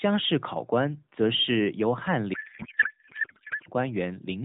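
The speech runs through an AMR narrowband mobile codec whose light, band-limited character fits the 12.2 kbps mode. At 2.34 s, just after "则是由翰", a codec payload misread sets in and lasts until 3.68 s. The sender packed the AMR frames in octet-aligned form, but the receiver unpacked them as bandwidth-efficient, so every field lands in the wrong place. The decoder then produces garbled noise and warble that barely tracks the speech.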